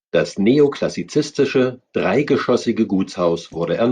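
Damaged compressed frames reached the decoder and were played anyway in this speech clip, a corrupt frame decoded fault: misread data briefly spatters energy at wrong frequencies, giving a short blip at 0.73 s and a louder, roughly -20 dBFS burst from 3.52 to 3.56 s.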